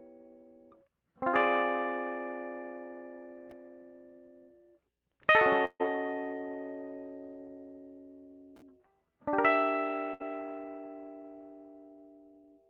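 Short concealed packet loss at 1.29 to 1.35 s: about 40 ms of the music never arrived, and the receiver extended the preceding sound for 36 ms, leaving a brief smear. Burst of packet loss at 5.65 to 5.82 s and 10.14 to 10.22 s: runs of 140 ms and 60 ms went missing, covered by a fading continuation of the last sound, including a 30 ms silence in the first, before the music resumes further on.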